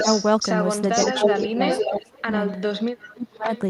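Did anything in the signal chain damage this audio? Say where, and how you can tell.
Yes, in the call processing. Echo leak appears at 0.00–0.31 s, 0.92–2.61 s, 3.00–3.10 s and 3.53–3.61 s: a copy of the speech trailing by 0.50–0.52 s, near full level early and much fainter later. On a spectrogram, the formant patterns repeat, shifted half a second. The likely cause is a loudspeaker path the echo canceller only partly removed.

Speech suppressed in double talk shows at 1.06–2.33 s (about 0.7 s affected in pieces) and 3.13–3.50 s. The waveform envelope collapses, by roughly 25 dB at worst. The likely cause is the canceller attenuating the near talker while the echo overlapped it.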